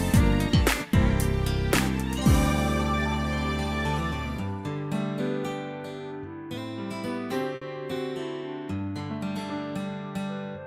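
At 7.55 s a short stall from a late packet lasting until about 7.63 s interrupts the audio. The packet arrived after its playout time, the jitter buffer emptied, and the receiver stretched the preceding sound by 60 ms before resuming exactly where it stopped, so nothing is lost and everything afterwards runs 60 ms later. It sounds like a brief held sound with a slight buzz or dip. A spectrogram shows smeared horizontal bands, and the waveform shows a repeating periodic stretch.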